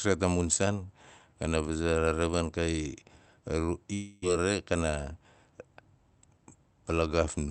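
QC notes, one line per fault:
3.93–4.26 s, long network dropout: packets likely stopped arriving for about 0.28 s, so the receiver stretched the last speech sound into a fading buzz lasting 0.29 s instead of falling silent. Speech then resumes over the 8 kHz call band with 11 ms lost.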